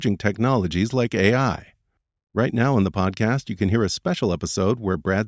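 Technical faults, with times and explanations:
No technical faults detected.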